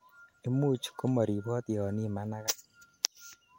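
At 2.45 s a brief glitch lasting about 40 ms, until 2.49 s, breaks into the speech. It is damaged data in a compressed stream: corrupted bytes make the decoder misread those frames and lose sync until it finds the next valid frame header.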